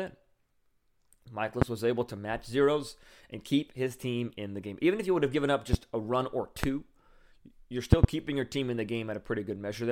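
Loud pops hit at 1.62 to 1.65 s, 5.73 to 5.76 s and 6.64 to 6.66 s, then a double pop from 7.93 to 8.06 s. Each is a sharp thump standing roughly 20 to 25 dB above the speech, which carries on underneath. The likely cause is a voltage spike from a plug, switch or static.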